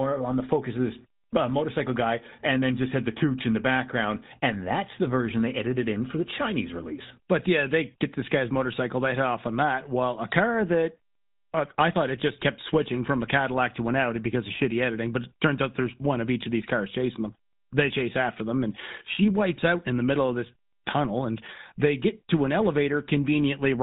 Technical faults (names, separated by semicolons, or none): GSM full-rate codec